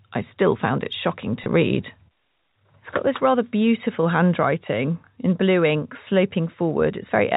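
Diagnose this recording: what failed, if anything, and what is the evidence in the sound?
Packet loss with pitch repetition, 1.44 to 1.46 s, just after "still found it shocking": a network gap, consistent with one lost 20 ms packet, bridged by repeating the last pitch period, heard as a brief held, buzzy tone over the G.711 telephone band.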